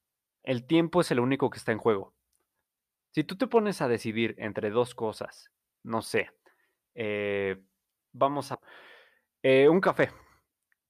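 Speech runs through the recording, with two brief cases of hard clipping at 3.56 s and 6.19 s, where peaks push only about 1 dB past what the signal path can carry and their tops are cut flat. Each lasts about 10 ms and sounds like a tiny crackle on a loud syllable, not a sustained fuzz. Unlike a limiter or compressor, which rounds peaks smoothly, the flat tops add a sharp burst of high harmonics. At 8.53 s the speech jumps abruptly forward with a small blip, as though part of the programme is missing. The likely cause is a stream segment skipped: one chunk of a segmented stream failed to load and playback continued with the next. What separates this from a dropout or a buffer glitch is that the sound doesn't pause or stutter and then resume where it left off. The timeline simply resumes further on.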